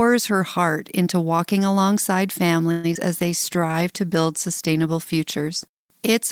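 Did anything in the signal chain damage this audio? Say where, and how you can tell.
Yes. The damage comes from the network path and the receiver's call processing, with four distinct faults between about 2.7 s and the end.

Call audio freeze, 2.71 to 2.86 s, just after "heart into walking alongside": the sound stalls and the last moment is stretched into a fading continuation for about 125 ms, then resumes exactly where it left off. Nothing is lost, but the playout delay grows by the same 125 ms. The cause is likely packets held up in transit, leaving the jitter buffer empty so the receiver had to improvise.

Short concealed packet loss, 2.94 to 2.97 s, shortly after the same phrase: a brief smear replaces the real audio. About 40 ms of the stream never arrived in time, and only around 12 ms of synthetic continuation covers the hole before the decoder blends back into the genuine signal. 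The playout also jumps ahead by roughly 30 ms here, so part of the sound is simply gone rather than delayed.

Call bitrate drop, from 3.19 s to the end of the clip: the texture turns rougher and more watery because the encoder was pushed from 32 kbps down to 18 kbps after the bandwidth estimate fell. It stays at the lowest rate for about 2.4 s. With far fewer bits per frame, Opus quantises the spectrum more coarsely, and the degradation persists through the rest of the audio.

Jitter buffer slow-down, 3.56 to 3.73 s: the audio drags, running at about 83% speed with no change in pitch, so sounds are drawn out. This happens because the jitter buffer was running low or had raised its target delay, so the receiver was rebuilding its reserve. It did this by repeating single pitch periods and small stretches of pause, inserting about 36 ms of extra material in total.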